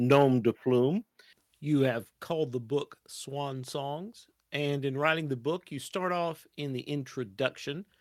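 Speech, with microphone overload from 0.11 to 0.24 s, just before "de plume you". Peaks drive about 4 dB past the converter's limit and flatten around one sample in twenty, giving a harsh, crackly edge, likely from excessive input gain. Microphone volume stepped down twice, dropping the level abruptly by about 4 dB at 1.02 s after "de plume" and about 2 dB at 2.04 s between "de plume you" and "called the book", likely automatic gain control reacting to the overload.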